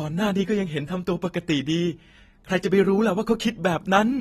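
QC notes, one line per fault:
throughout AAC compression: dull, smeared speech with fizzy, warbling sibilants and nothing above 13.9 kHz, likely from AAC-LC coding, which fits a bitrate near 36 kbps.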